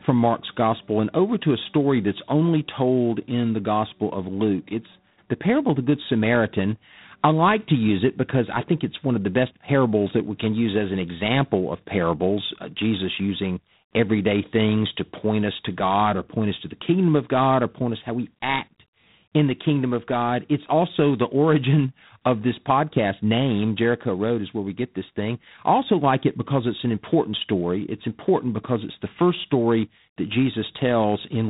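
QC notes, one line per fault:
Throughout, G.726 ADPCM: harsh rasping hiss riding the speech level, which fits the coarse 24 kbit/s mode's few-bit prediction error, and nothing above 3.8 kHz.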